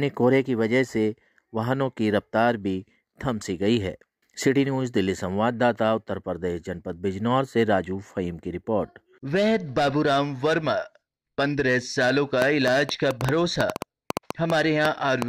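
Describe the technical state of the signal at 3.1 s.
At 3.1 s the signal is intact, with no dropout, clipping, distortion or other fault audible at that point.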